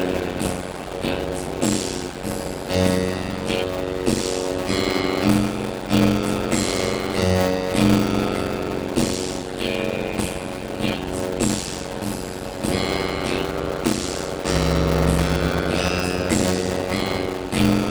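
A block size mismatch (padded) runs through the whole clip. A steady buzz at about 91.9 Hz sits under the audio. The sound also plays at 0.533 times normal speed, yet its pitch stays roughly normal. Each block carries a short run of zeros, which fits 256-sample blocks padded out to a larger read size.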